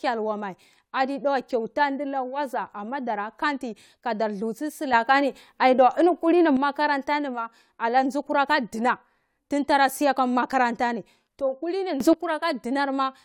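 Speech clip with two sudden gain jumps: the level, background noise included, steps up by about 8 dB from 4.93 to 6.57 s, then by about 12 dB from 12.00 to 12.13 s. It's likely a gain setting applied instantly, without any ramp.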